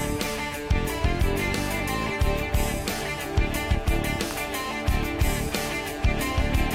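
At 4.31 s a single sharp snap sits on top of the sound: an electrical switching spike, most likely picked up from a nearby switch, motor or static discharge arcing onto the audio line. It is over in about a millisecond and peaks at roughly -15 dBFS. On the waveform it shows as one narrow, isolated spike standing out from the surrounding level; on a spectrogram it forms a thin vertical line spanning the full frequency range.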